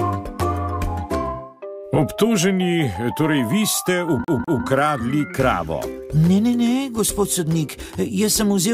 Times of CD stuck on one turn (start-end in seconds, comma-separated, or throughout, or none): 4.24-4.65